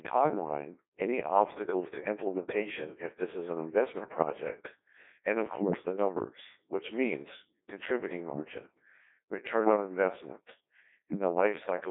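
From start to finish the speech passes through a Codec 2 vocoder. Only pitch, voicing, energy and a coarse spectral envelope survive, and the decoder rebuilds the voice from sine waves. Heavy damage, a robotic buzz and a 300 Hz to 3.6 kHz band with nothing above 3.8 kHz point to roughly 1.2 kbit/s.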